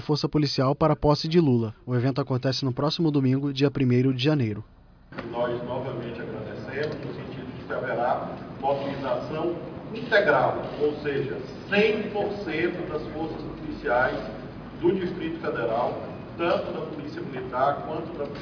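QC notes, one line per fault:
No technical faults heard anywhere in the audio.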